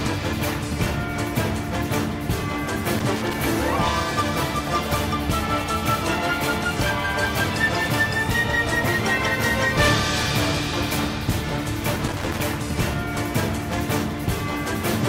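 Around 2.99 to 3.34 s, and again from 12.08 to 12.39 s, there's loose connector crackle: a worn contact making and breaking, giving short irregular bursts of scratchy crackle.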